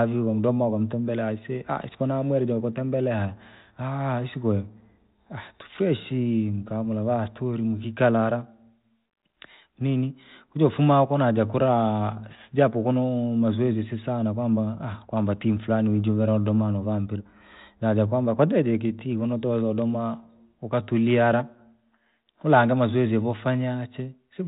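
No technical faults occur anywhere in this speech clip.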